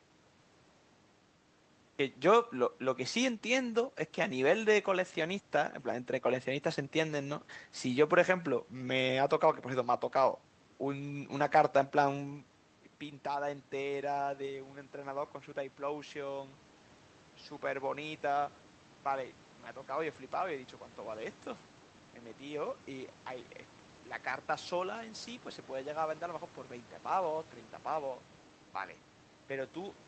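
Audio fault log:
0.00–1.99 s, cut-off start: capture began late, so the clip holds digital silence until 1.99 s, where the speech enters already mid-sound, with no natural attack or fade-in, leaving an abrupt hard edge as the audio switches on.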